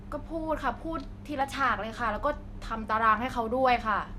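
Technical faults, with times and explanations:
1.41 to 1.93 s, drift correction step: The speech abruptly plays faster and higher. Speed rises by 5.8 percent and pitch by 97 cents, almost a semitone. The two move together, which marks a change in playback rate rather than a pitch effect. After about half a second, both snap back to normal at 1.93 s. The likely cause is clock-matching software stepping its rate once to refill or drain its buffer.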